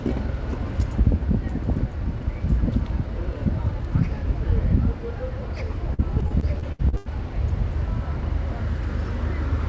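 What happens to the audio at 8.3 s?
Nothing goes wrong at 8.3 s: the sound passes through intact, with only the steady absence of content above 8 kHz that comes from the call path's wideband codec, which fits G.722 running normally.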